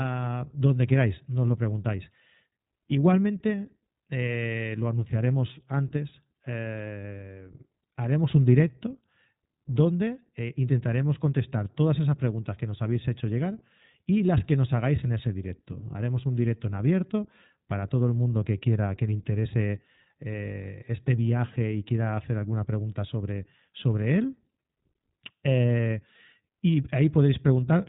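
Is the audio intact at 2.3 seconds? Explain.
No. At 2.3 seconds the speech carries iLBC codec damage, and it runs through the whole clip. The codec works on short frames, here likely 20 ms each, as the coarseness fits about 15.2 kbps. Each frame's excitation is coded on its own, without help from the frame before. The result is plainly audible. Speech sounds rough and synthetic. Nothing above 3.8 kHz survives, so the sound is narrow and muffled.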